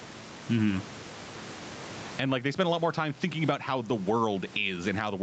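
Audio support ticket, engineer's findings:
Gain pumping, whole clip: roughly a 20 dB swing. Likely a fast limiter or compressor reining in mic gain set way too hot. Speech comes out squashed and flat.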